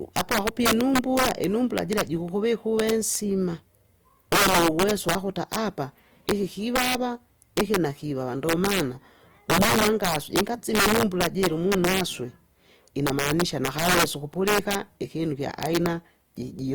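Integer overflow runs through the whole speech clip. The loudest peaks are driven about 7 dB past the integer ceiling, and instead of being limited they wrap to the opposite extreme. Around two percent of samples flip across the full range, producing violent cracks on loud syllables, far harsher than clipping.

Compression artefacts are also present throughout, plainly audible as grainy, rough texture on voiced sounds. The likely cause is Opus in its CELT music mode, running at a rate that fits about 24 kbps. Starved bands are filled with noise or folded copies rather than left empty, while full bandwidth reaching about 20.2 kHz is kept.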